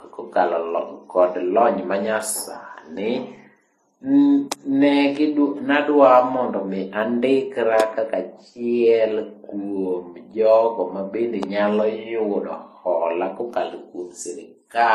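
From start to finish the speech carries layered smeary, swirly artefacts, and nothing survives above 13.1 kHz. That mix points to transcoding between lossy codecs, likely low-bitrate MP3, then HE-AAC, then Vorbis, each pass stacking its own damage onto the last.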